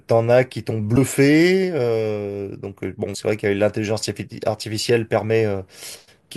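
At 0.96 s and again at 3.14 s the speech is interrupted by a brief glitch, each lasting well under 20 ms. Both are damaged data in a compressed stream: bytes in the encoded file were lost or overwritten, so the decoder misread the affected frame, lost sync, and had to hunt for the next valid frame header before normal decoding resumed. The result is a short glitch at each point.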